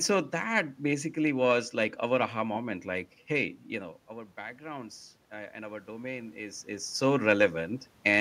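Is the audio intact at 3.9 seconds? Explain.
No. From 3.69 to 6.95 s, automatic gain rising is under way: after the input fell by about 15 dB as the talker moved away around 3.5 s, the gain control slowly added about 4 dB. Voice and room noise swell together, showing as a gradually widening waveform envelope and a brightening noise floor on a spectrogram.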